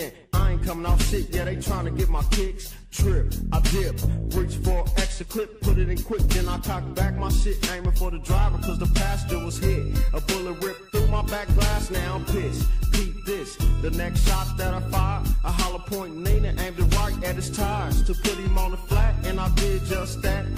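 No faults are audible anywhere in the recording.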